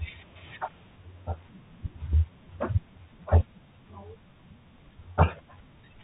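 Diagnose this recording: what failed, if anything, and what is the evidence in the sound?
The codec stage failed: the speech passes through a Bluetooth CVSD headset codec for its whole length. Nothing survives above 4 kHz, s sounds come out scratchy, and a granular hiss sits underneath. That points to a one-bit slope coder around 64 kbps, whose adaptive step can't follow fast loud highs. A plain low-pass filter would dull the sound without adding grit.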